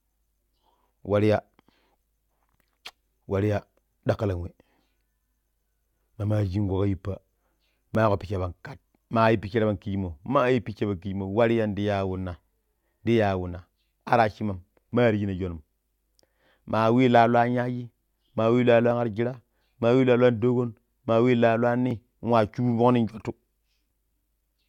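At 7.95, 13.93, 14.92, 18.91, 21.91 and 23.91 s you get tiny skips from overlap between stream segments. Roughly 15 ms of speech gets trimmed at one-second segment joins, so the waveform jumps.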